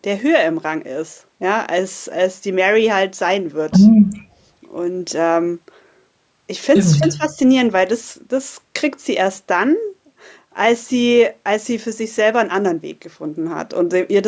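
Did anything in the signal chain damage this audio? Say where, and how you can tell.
Yes. From 4.15 to 4.47 s the room tone behind the speech sinks by about 15 dB for roughly a third of a second, then comes back. That is background gated by the echo canceller in the call-processing stage. While the far-end loudspeaker was active, the canceller's suppressor clamped the microphone path hard and took the ambient sound with it, releasing once it judged the echo gone.

Between 6.98 and 7.38 s the talker's own level ducks, dropping by something like 15 dB over a fifth of a second or so. The likely cause is speech suppressed in double talk, again in call processing. With both ends speaking at once, the echo canceller could not separate near-end speech from loudspeaker echo and attenuated everything. The microphone processing itself, with nothing above 8 kHz, is ordinary call bandwidth.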